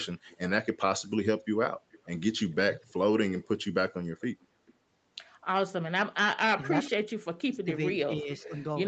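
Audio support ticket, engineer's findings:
Echo leak. A delayed copy of the talk trails it by about 0.44 s, at 0.28–0.37 s, 1.4–3.48 s, 4.2–4.74 s, 6.63–6.9 s and 8.36–8.42 s. It sits about 30 dB under the direct speech in most spots. At 4.2 s it is about 25 dB under, and at 6.63 s about 15 dB under. The likely source is the far-end echo canceller. Its loudspeaker output reaches its own mic, the residue is not fully cancelled, and it is sent back. The delay creeps from 436 to 445 ms.

Speech suppressed in double talk, 6.9–8.61 s. Far-end talk dips and breaks up in pieces, about 0.7 s affected in total, with the deepest drop roughly 30 dB. It begins right as the loudest echo burst ends and overlaps the 8.36 s echo. The likely cause is the canceller's suppression stage. Both sides are active at once, and it cannot separate the local talker from the loudspeaker echo, so it turns both down. 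The band tops out at 8 kHz throughout, from the call mic chain.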